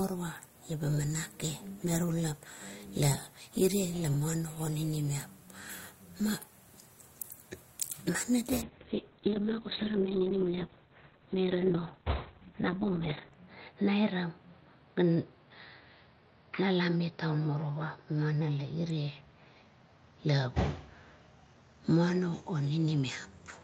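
From 8.62 s to the end, the speech turns muffled and rough, with a watery, smeared texture and the top end gone. This is a call bitrate drop. The call's bandwidth estimate fell and the encoder was pushed to far fewer bits, which fits a fall from roughly 32 kbps to about 6 kbps. At that rate Opus codes coarsely and narrows the audio band from 20 kHz to 4 kHz. The worst stretch lasts 4.7 s, and quality doesn't return before the recording ends.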